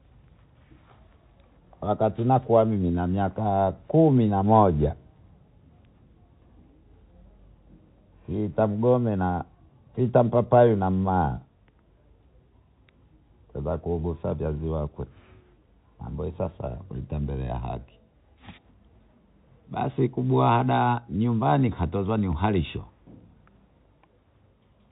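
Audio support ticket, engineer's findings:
No faults found; speech carries the expected G.711 telephone-band character, with nothing above 4 kHz and only a faint level-tracking quantisation hiss, consistent with 64 kbps mu-law coding.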